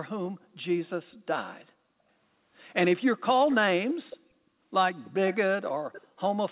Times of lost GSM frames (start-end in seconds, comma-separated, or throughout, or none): none